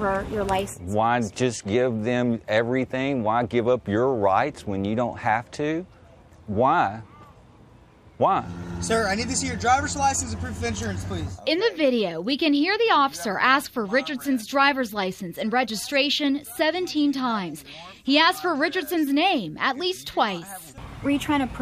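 No technical faults can be heard anywhere in the clip. Nothing stands out as going wrong at any point in the audio.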